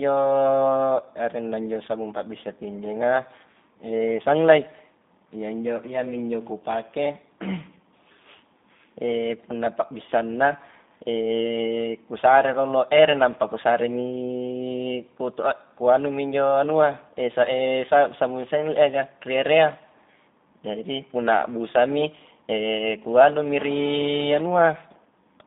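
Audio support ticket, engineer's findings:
G.729 codec, throughout: band-limited to 200 Hz–3.7 kHz, nothing above 3.8 kHz, plainly rough, synthetic speech texture. Consistent with 8 kbit/s G.729A frame-based pulse coding in the VoIP path.

Hard clipping, 12.98–13.04 s: brief crackle on a peak. Gain stage driven about 2 dB past full scale, flattening waveform tops and spraying high harmonics.

GSM phone buzz, 23.59–24.42 s: hard raspy buzz at 217 Hz, about 14 dB below the speech, steady. Nearby 2G handset in a call; audio circuitry rectifying its burst transmissions.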